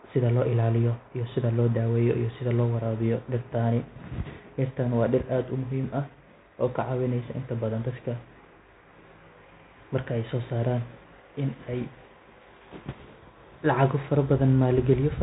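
Throughout the speech runs a Bluetooth CVSD headset codec, which fits a 64 kbps link: one-bit up/down steps with adapting size. A spectrogram shows a flat ceiling at 4 kHz, sibilants scratchy and smeared, loud peaks slew-limited, and granular hiss filling the gaps.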